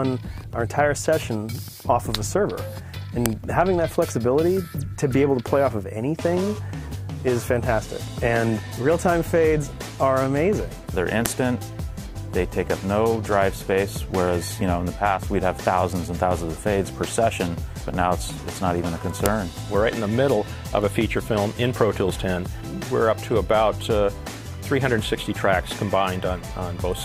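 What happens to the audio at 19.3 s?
At 19.26 s there's a sharp click: a file header played as audio, where a new piece was joined without stripping its header bytes, so they play as a snap.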